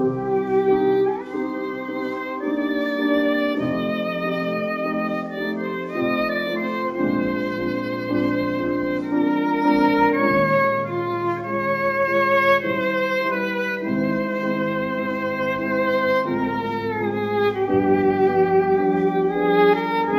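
Across the whole clip there is imaging from linear upsampling. The audio was raised from 16 kHz to 44.1 kHz by joining samples with straight lines, a poor anti-imaging filter. The top of the original band below 8 kHz sounds dulled, and a faint mirrored copy of it sits between 8 and 16 kHz, roughly 40 dB down, giving a thin metallic shimmer. Unlike aliasing, this added content sits above the original band edge and mirrors it, rather than folding downward as inharmonic tones.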